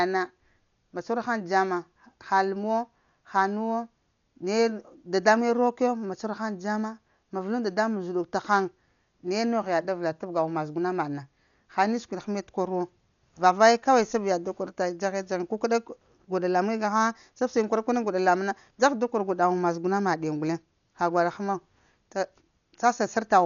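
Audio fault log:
Throughout, Dolby Digital compression: the speech sounds dull and rough, with fluttering noise around tones. This is likely heavy AC-3 coding at a rate that fits about 48 kbps, with bare frequency lines filled by dither. A spectrogram shows a hard ceiling at 6.9 kHz and speckled noise between harmonics.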